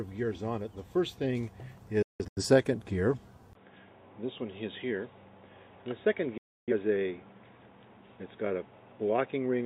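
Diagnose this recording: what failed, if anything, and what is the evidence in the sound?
Digital broadcast dropout at the reception and decoding stage. From 2.02 to 2.43 s the sound drops out in several short holes, about 256 ms missing within roughly 340 ms, longest gap about 170 ms. A dropout at 6.38 to 6.72 s loses about 300 ms. Each gap has a 3 ms fade, typical of a receiver muting failed frames, and that audio is gone.

At 3.53 s there is a 20 ms silence, then the sound turns dull through to the end: nothing above 3.8 kHz, level unchanged, and a new noise floor around 35 dB below the signal. The likely cause is an input switched to a poorer device at the capture stage.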